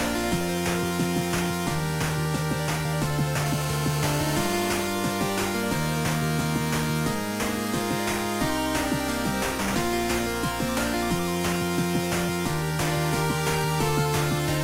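From 3.46 to 4.87 s, a GSM phone buzz appears: a steady, raspy 217 Hz rasp with dense harmonics, about 10 dB below the signal, from rectified call-burst radio pulses.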